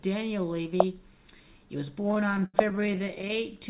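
From 2.0 to 3.4 s, packets arrived late and the jitter buffer kept running dry, producing repeated stalls (stutter). Dozens of short gaps, the longest 80 ms, were bridged by stretching the preceding sound, so about a third of that stretch drags and hiccups. The band stops at 4 kHz, consistent with a narrowband telephone codec.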